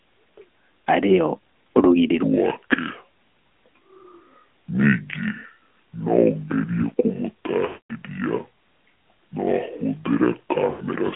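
AMR narrowband mobile codec damage runs through the whole of this speech recording. The sound is confined to a 200 Hz to 3.4 kHz telephone band and has the buzzy, synthetic edge of a vocal-tract model rebuilt from sparse pulses, which points to a mid-rate mode around 10.2 kbps. A section at the wrong speed begins at 2.23 s and lasts to the end. From there the sound plays at 0.611 times its proper rate, so it drags and drops roughly ten semitones in pitch, likely from playback or an edit locked to the wrong clock. Lost AMR speech frames occur at 7.66 to 7.93 s and at 10.70 to 10.83 s. Each time the decoder keeps repeating its last good pitch and spectral settings with falling gain. The longer gap of 240 ms, which fits about a dozen missing 20 ms frames, smears out and fades toward silence. The shorter 100 ms gap gives a briefer drawn-out warble before the sound returns weak and rough.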